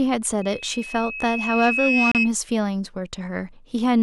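From 0.41 s a loudspeaker feedback squeal creeps in at 2.6 kHz: the mic is hearing its own speaker, and at that pitch the loop gain tops one, so the tone feeds itself. It swells over roughly a second and a half to sit a few dB above the speech, cutting off at 2.32 s.

Inside that stretch, from 2.12 to 2.15 s, there's a gap between stream segments: a hard-edged hole of about 33 ms where two segment timestamps don't quite meet and the player pads with silence. Nothing's actually lost, and the timing fits 4-second segments.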